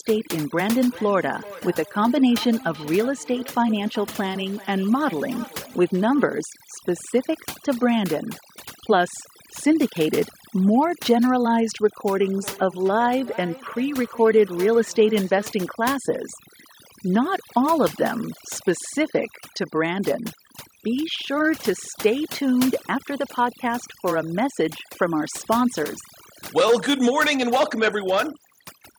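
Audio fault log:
throughout: overdone noise removal. The noise reduction is set far too aggressively. Any frequency band that comes close to the tool's noise estimate is pulled down hard or removed, and the quieter parts of the speech fall into those bands and are lost with the noise. The result is a background near silence with small twinkling artefacts.
0.90–6.37 s and 12.22–15.58 s: feedback echo between two devices. Two devices in the same room appear to share the call. One plays back what the other's microphone sent, and that microphone picks it up again. Each device's echo canceller removes only its own playback, so this loop passes through uncancelled. The speech returns at a steady interval of roughly 0.4 s and peaks at about 19 dB below the speech in the first stretch and about 17 dB below it in the second.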